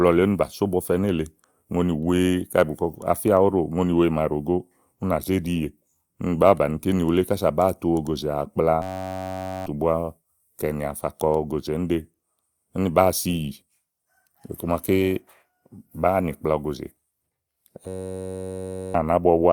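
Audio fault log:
8.82–9.66 s and 17.88–18.94 s, system hang loop: a 10.67 ms slice, which fits a 512-sample buffer, repeats exactly, giving a steady 93.8 Hz buzz that replaces about a second of speech each time. The spectrogram shows flat horizontal harmonics at multiples of 93.8 Hz, and the waveform shows one identical cycle tiled repeatedly.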